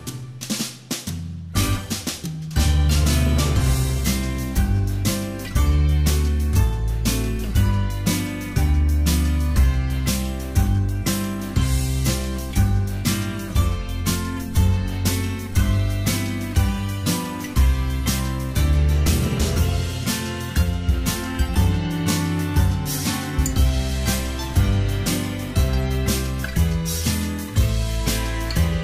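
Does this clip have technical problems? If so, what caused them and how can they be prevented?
No, nothing in this clip stands out as a technical problem, so there's nothing here that needs preventing.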